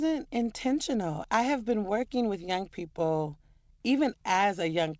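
Nothing goes wrong anywhere in this speech, and the only thing to notice is the call path at work, with no content above 8 kHz, which fits a G.722 wideband codec running at 64 kbps.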